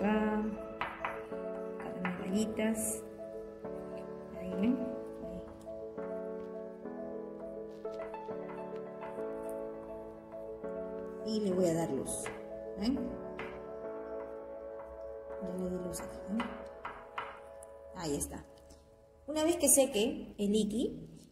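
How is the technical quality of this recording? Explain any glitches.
No glitches or technical faults can be heard anywhere here.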